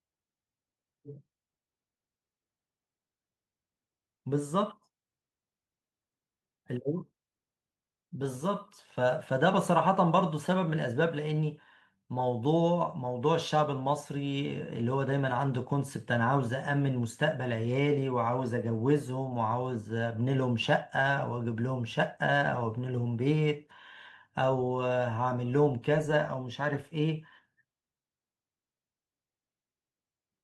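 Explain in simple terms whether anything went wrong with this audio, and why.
Nothing stood out when listening to this speech recording, and no part of it sounded like a technical problem.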